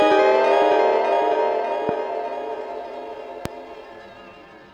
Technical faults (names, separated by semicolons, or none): loud pop